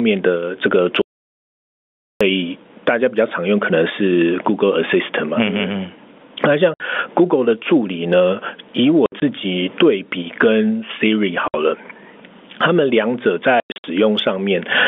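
Speech heard over a telephone-band line, with the top cut near 3.5 kHz as expected for G.711 coding, and it suffers constant gain pumping: loud and soft parts are squashed closer together in level, with the level swinging by about 25 dB. That points to input gain set far too high, with a fast limiter likely clamping it. From 1.02 to 2.21 s there is an audio dropout to silence. For about 1.2 s the signal is replaced by silence with no room tone, likely from the input being lost while recording continued. Its length sets it apart from the short holes that follow. Packet loss filled with silence cuts shorter holes with hard edges: 60 ms at 6.74 s, 80 ms scattered across 9.06 to 9.22 s, 60 ms at 11.48 s, and 200 ms scattered across 13.60 to 13.84 s. Every gap is a multiple of 20 ms, which fits 20 ms packets.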